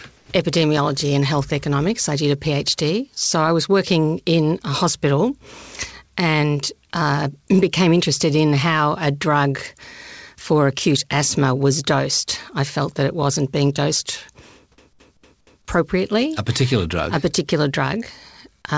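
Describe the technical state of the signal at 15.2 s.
A fast, even stutter runs through this moment: the same scrap of speech, about 0.23 s long, plays over and over with a short mute at each jump, four repeats in all between 14.77 and 15.68 s. It is a CD stuck on one turn, where a scratch knocks the laser back one track at the same point on every rotation, so the loop length is set by the disc's turn. The call path's G.722 band limit at 8 kHz also holds here.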